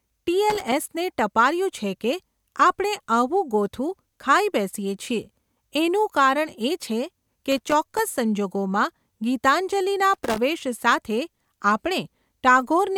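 Speech recording marred by loose connector crackle in three short bursts, at 0.50 to 0.72 s, 7.52 to 7.99 s and 10.14 to 10.38 s. Each burst is an irregular scratching crackle lasting roughly a quarter to half a second, the sound of a worn or dirty contact rapidly making and breaking as the plug or cable shifts. The signal is chopped on and off during these intervals, and the abrupt interruptions produce clicks and pops layered over the speech.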